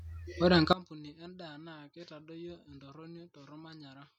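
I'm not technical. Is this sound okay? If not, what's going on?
No, from 0.73 seconds to the end the speech drops to a faint copy of itself. This is most likely one channel inverted: one side of the stereo is flipped upside down, so when both sides are mixed together the matching voice cancels out.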